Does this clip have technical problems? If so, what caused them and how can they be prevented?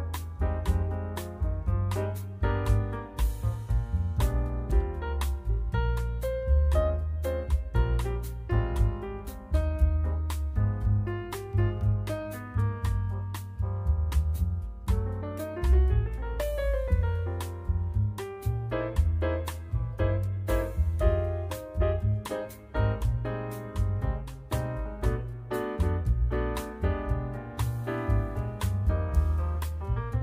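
No, there are no technical problems to report in this clip. Nothing in it calls for a cause to trace or a fix to apply.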